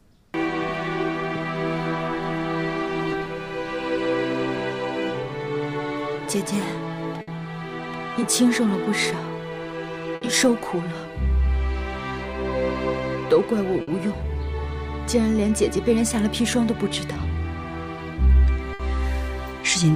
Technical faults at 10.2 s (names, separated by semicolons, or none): burst of packet loss